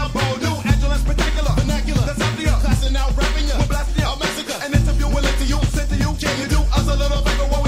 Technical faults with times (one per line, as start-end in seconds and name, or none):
0.46-7.47 word clock ticks